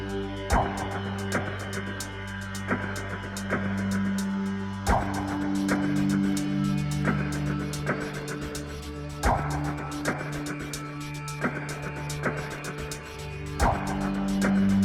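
Nothing technical goes wrong anywhere in this audio, so there's no fault to point out at any moment.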